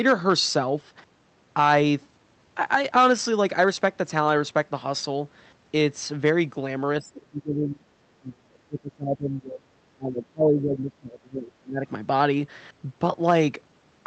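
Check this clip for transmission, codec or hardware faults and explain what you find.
The speech is repeatedly pushed down by speech suppressed in double talk, in three stretches: 6.98 to 7.85 s, 8.14 to 9.8 s, and 9.96 to 11.86 s. Each time the level drops by roughly 25 to 30 dB, and the speech thins or breaks into fragments. The likely cause is an echo canceller that could not separate this side's talk from the loudspeaker echo of the far side during overlap, and attenuated both. On a waveform the envelope collapses into choppy troughs, and a spectrogram shows the harmonics fading inside a spectrum that already stops at the call path's 8 kHz ceiling.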